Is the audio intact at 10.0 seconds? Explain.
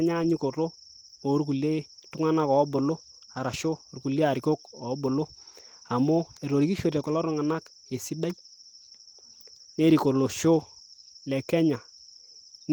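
Yes, the audio is intact at 10.0 seconds, with the speech coming through the Opus voice compression as it does elsewhere and nothing breaking into it at that point.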